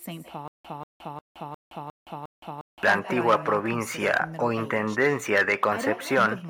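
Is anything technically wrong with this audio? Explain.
Yes, there are two faults. Echo with no canceller runs through the whole speech clip: the far end's microphone picks up the call from its loudspeaker and nothing removes it, so every phrase returns roughly 150 ms later as a quieter, about 11 dB down, thinner shadow.

A stutter with silent gaps occurs from 0.48 to 2.83 s. The same 187 ms fragment plays six times at an even 355 ms pace, each followed by 168 ms of dead digital silence. The likely cause is a stalled stream replaying its last fragment on each retry, with the intervening audio lost.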